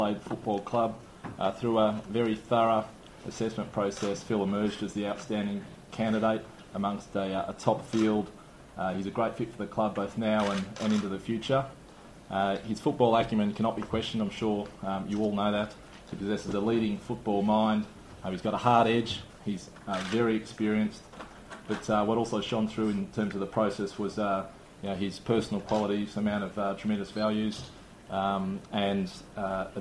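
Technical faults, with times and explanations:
No technical faults, with times and explanations, are present.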